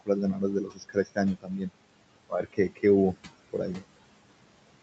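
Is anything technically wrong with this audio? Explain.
Yes. Throughout the clip the background sinks away between phrases and swells back under the speech. These are noise suppressor artifacts: frame by frame, the suppressor pulls down whatever bands it judges to be steady noise, here by about 21 dB.

The speech is also cut by the noise suppressor at 0.64 to 1.18 s, 1.35 to 1.71 s and 2.29 to 2.84 s. Parts of the speech turn faint and swallowed, dropping by about 18, 21 and 15 dB respectively, for roughly a third, a fifth and a sixth of a second in total. The suppressor mistook those quieter speech stretches for background and turned them down with it.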